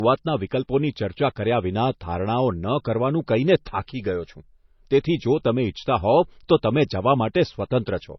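From start to end, the speech has nothing above about 5.9 kHz and carries the swirly, smeared artefacts of heavy MP3 coding. This is likely low-bitrate audio saved at a high bitrate: a source around 24 kbit/s re-encoded near 192 kbit/s, which cannot restore the lost detail.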